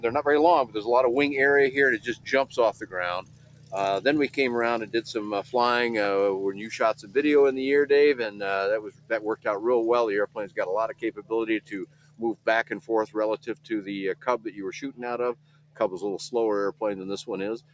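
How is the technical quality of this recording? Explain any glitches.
The recording has clear technical problems. It shows three kinds of fault. The call path's microphone processing passes nothing above 8 kHz.

A noise suppressor applied to music or sounds runs through the whole clip. It was built for speech. It treats steady tones and decaying tails as noise. Its gain swings by around 20 dB, so held sound pumps and thins while attacks survive.

Sound cut by the noise suppressor appears at 0.65 to 0.82 s, 1.98 to 3.74 s, 6.52 to 7.16 s, 8.81 to 9.46 s, 10.27 to 13.71 s, 14.14 to 15.01 s, 15.33 to 15.8 s and 17.58 to 17.73 s. The suppressor judged these passages to be noise. Level sinks by about 15 to 17 dB, and sustains collapse early.

Regular clicks occur every 2.19 s from 1.66 s to 17.03 s, about seven in all. Each is a tiny discontinuity. The likely cause is clock drift buffer slips. 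Two clocks disagree by roughly 150 ppm, which fits dropping or repeating a small block of samples at each slip.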